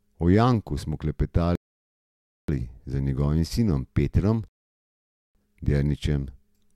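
Twice the speech drops abruptly into silence and then picks up exactly where it left off, with nothing skipped: first from 1.55 to 2.48 s, a gap of 0.93 s, and again from 4.48 to 5.35 s, adding 0.87 s. These are rebuffering stalls. The player used up the audio it had downloaded and halted until more arrived, so playback simply pauses and the clip runs longer.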